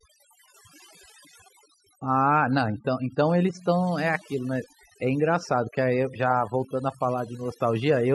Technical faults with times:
0.00-8.14 overdone noise removal

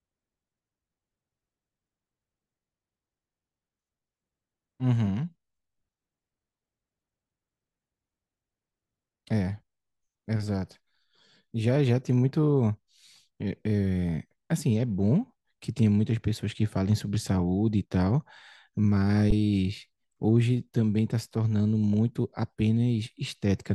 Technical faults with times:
19.30 underrun with held sample

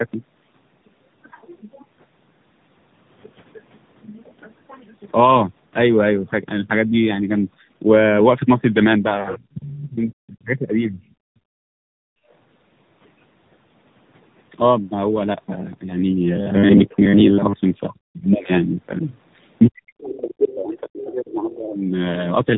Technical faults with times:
0.00-22.57 tandem speech coding
9.28-9.44 other side's voice leaking through
9.54-11.00 speech suppressed in double talk
11.28-12.29 background gated by the echo canceller
17.88-18.50 speech suppressed in double talk
19.67-21.82 speech suppressed in double talk
20.02-20.55 other side's voice leaking through
21.01-21.55 other side's voice leaking through

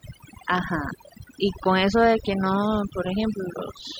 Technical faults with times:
0.00-3.99 overdone noise removal

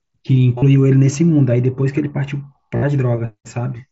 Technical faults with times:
0.58-0.62 concealed Bluetooth headset packet loss
2.76-2.83 concealed Bluetooth headset packet loss

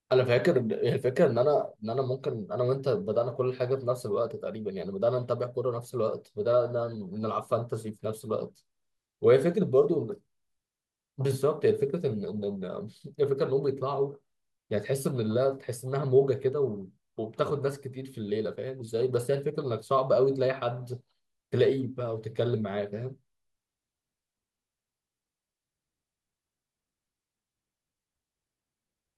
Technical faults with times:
none

